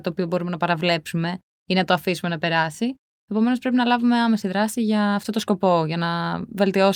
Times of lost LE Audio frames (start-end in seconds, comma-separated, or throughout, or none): none